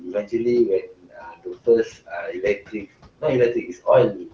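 A speech clip with noise suppressor artifacts running throughout. The suppressor lowers each band it judges to be steady noise, frame by frame. The room noise, about 18 dB below the speech, dips between phrases and swells back under them. The same process also causes speech cut by the noise suppressor in five stretches: 0 to 0.34 s, 0.81 to 1.68 s, 1.85 to 3.23 s, 3.54 to 3.87 s, and 4.13 s to the end. Here the suppressor mistook quiet parts of the speech for noise. Soft consonants and word endings drop by up to about 22 dB in the two middle stretches and about 16 to 19 dB elsewhere. Those sounds come across swallowed or faint. Within each stretch, only a few hundred milliseconds are actually affected, closer to three-quarters of a second in the longest two.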